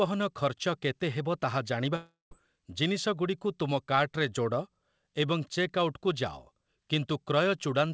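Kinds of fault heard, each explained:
Long network dropout: At 1.96 s the speech breaks off, and it returns at 2.33 s. The likely cause is a run of lost packets. The receiver stretches the last sound into a tail that fades over about 0.35 s. The final 0.15 s is silent. Speech then resumes, but about 0.36 s of it never plays. Like the whole call-codec signal, the tail has nothing above 8 kHz.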